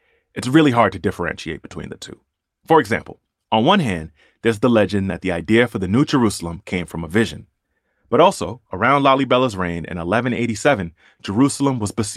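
A speech recording with nothing technically wrong with it to report, so there are no times or causes to give.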